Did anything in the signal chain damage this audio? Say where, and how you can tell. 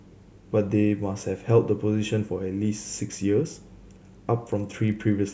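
Yes. From 4.12 s to the end at 5.33 s, the speech carries a 25 Hz buzz that is present only while sound is present. That points to a resampler restarted on every block: each 40 ms block is converted on its own, so every edge leaves a small error.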